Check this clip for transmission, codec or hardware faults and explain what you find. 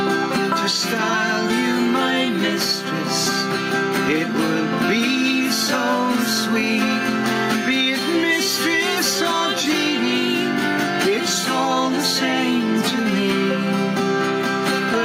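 One fault runs through the whole clip: gain pumping. The gain swings by around 10 dB, pulled down under loud sounds, likely from excessive input gain driving a fast limiter. Unlike a noise gate, a limiter lowers the level rather than cutting it to silence.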